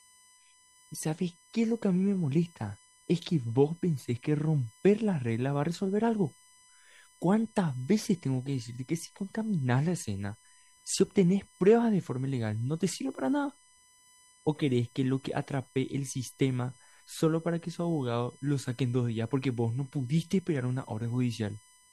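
USB whine runs through the whole speech clip: a steady, fixed-pitch tone built on 1 kHz, loudest at its 9 kHz harmonic, sitting roughly 30 dB beneath the speech. The bus's 1 ms frame activity is leaking into the audio through power or ground.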